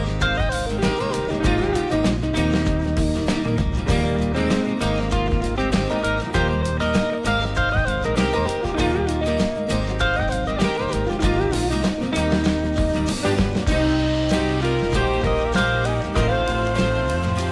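No technical faults are audible.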